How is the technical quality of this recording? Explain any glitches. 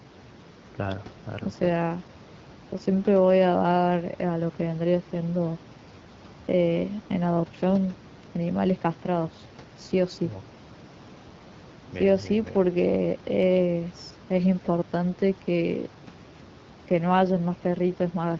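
No faults are audible in the speech: room noise sits about 21 dB below it, and the AMR wideband (HD Voice) codec at 12.65 kbit/s leaves only a light coding texture on the band-limited sound.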